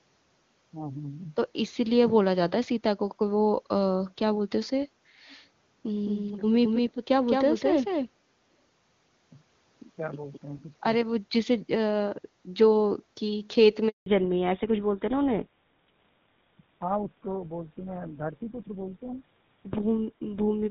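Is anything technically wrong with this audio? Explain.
Yes, there are three problems.

From 6.06 to 10.38 s there's a doubled audio track. A second, clean copy of the speech runs roughly a fifth of a second behind, about 5 dB quieter, with no room smear. It cuts in and out abruptly, likely from a slower second capture path getting mixed in.

At 13.88 s there's a handover gap. The call seems to switch networks, no speech frames arrive, and the voice dies off fast and leaves 180 ms of silence until 14.06 s. Whatever was said in that window is just gone.

Right after that, from 14.06 s to the end, there's a fallback to narrowband. Before this point the HD Voice path carries the upper band cleanly. Now nothing above 4 kHz survives, which fits a drop to an older codec along the lines of GSM full rate, so the voice turns duller and a bit rougher.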